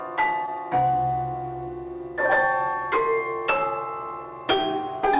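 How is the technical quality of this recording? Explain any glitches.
There's one small glitch, heard through a narrowband call path with nothing above 4 kHz, which fits G.711. At 0.46 to 0.51 s there's short concealed packet loss: about 20 ms never arrived, and the receiver papered over it by stretching the preceding sound, leaving a quick smear or wobble.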